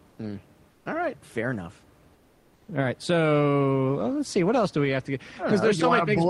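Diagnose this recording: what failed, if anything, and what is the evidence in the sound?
Comfort noise in place of the background, a codec-stage fault: at 0.69–0.85 s and 2.13–2.67 s, after "right fair enough", the room's textured noise becomes a flat hiss about 5–6 dB quieter. Likely Opus DTX stopping transmission. Unlike gating, the pause is filled, not silent.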